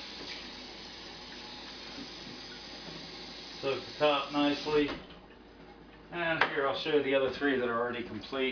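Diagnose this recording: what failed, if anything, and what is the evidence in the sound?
Nothing here points to a failure at any stage of the chain, so there's nothing to diagnose in this recording.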